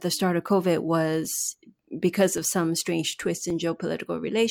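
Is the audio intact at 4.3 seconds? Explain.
Yes, at 4.3 seconds the speech plays through cleanly, with no dropout, click, distortion or other technical fault to be heard at that moment.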